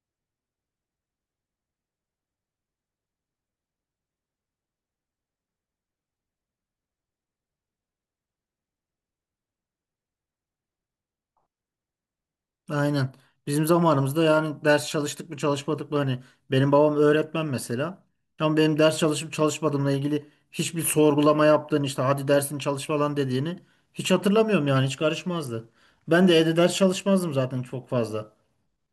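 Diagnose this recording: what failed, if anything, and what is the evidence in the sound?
Nothing failed; no fault is audible anywhere in this recording.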